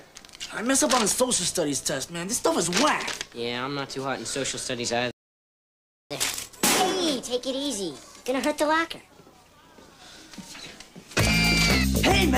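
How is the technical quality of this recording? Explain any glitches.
The recording has two linked playback faults. From 5.11 to 6.11 s a playback stall silences the audio for about one second, likely because the player ran dry or its thread blocked. The waveform shows a flat gap and the spectrogram a blank column. From 6.11 to 9.11 s comes catch-up at higher speed. The player resamples its backlog at 1.25 times speed, so the sound runs faster and about four semitones higher. On the spectrogram, harmonics shift upward and events compress together, then settle back after 9.11 s.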